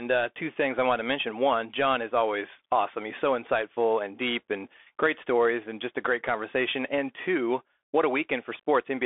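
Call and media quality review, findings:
Bluetooth CVSD headset codec, throughout the clip. Speech band-limited to roughly 300 Hz–3.5 kHz, nothing above 3.8 kHz. Scratchy sibilants, granular hiss under speech, loud high content distorting as the one-bit adaptive step lags; fits a 64 kbit/s CVSD link.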